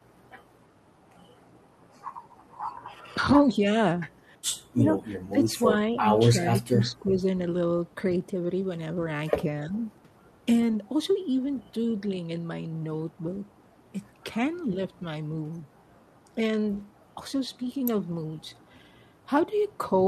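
Between 3.47 and 9.8 s (3.47, 4.77, 5.9, 9.67 s), speech suppressed in double talk dips the speech by up to about 15 dB, likely the echo canceller ducking both sides together. At 16.76 s an echo leak returns a faint copy, delayed 338 ms and about 30 dB down.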